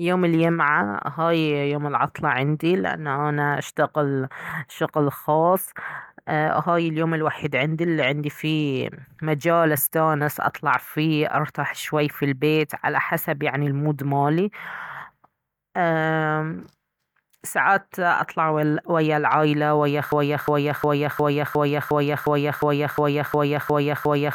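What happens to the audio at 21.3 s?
At 21.3 s the speech is caught in a broken-record loop, running from 20.12 s to the end: the same 0.36 s fragment repeats identically twelve times, likely a stalled stream resending its last fragment. Unlike an echo, the copies never fade, and the following speech is lost.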